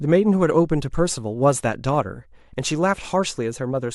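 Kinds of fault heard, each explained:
Dropped samples at 1.95 s: a single sharp click cuts through the speech, likely caused by a handful of samples, roughly four, going missing from the stream. Losing a few hundredths of a millisecond takes away no audible sound, but the waveform leaps straight from one value to a later one with nothing in between. That sudden step is heard as the click, and it would appear in a spectrogram as one thin vertical line spanning the frequency range.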